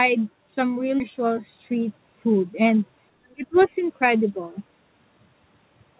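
A short speech clip, band-limited to 4 kHz, which fits a G.711 mu-law call at 64 kbps. At 1.0 to 1.02 s there's a skip ahead: roughly 0.4 s of audio is simply gone, dropped before playback so the stream caught up, and the two sides of the cut are butted together with no gap or fill. Around 3.30 to 3.34 s, and again from 3.60 to 3.69 s, you can catch the other side's voice leaking through, faint at first (about 35 dB below the talker) and then stronger (about 20 dB below). Likely cause: the far end coming out of the talker's loudspeaker and the echo canceller not fully removing it from the mic. Overlapping that, from 3.35 to 3.73 s, the talker's own speech is suppressed in double talk. It dips in pieces, about 0.3 s in total, by as much as about 25 dB. That's most likely the echo canceller failing to separate the two voices while both sides talk at once and turning everything down.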